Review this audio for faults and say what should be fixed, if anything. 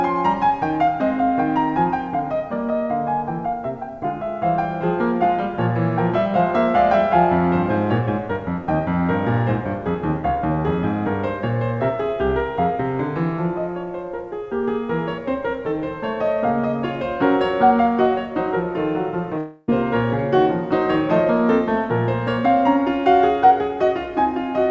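From 19.38 to 19.70 s the music becomes a fading buzz, then resumes with 0.3 s gone: likely a long network dropout, far longer than a single-packet glitch. A more stable network connection with redundancy or forward error correction would prevent it.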